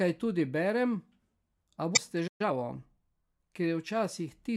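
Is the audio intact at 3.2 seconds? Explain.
Yes, the speech at 3.2 seconds plays through intact, with no dropout, click, distortion or other fault at that moment.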